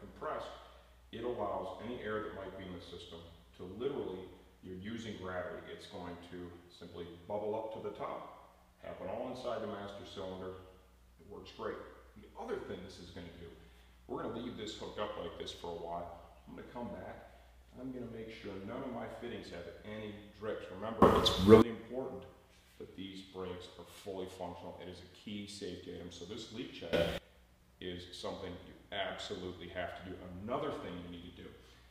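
A digital gain change, likely applied without a ramp, causes two sudden gain jumps: at 21.02 s the level rises by about 22 dB for 0.6 s, and at 26.93 s by about 20 dB for 0.25 s, with sound and background noise leaping together each time.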